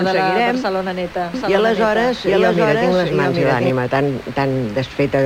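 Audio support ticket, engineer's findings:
Doubled audio track, 1.34 to 3.7 s. Full-band copy trailing about 0.7 s behind, at roughly equal level, no decay or room colour. Starts and stops abruptly. Likely a second, slower capture path or an edit holding two offset copies.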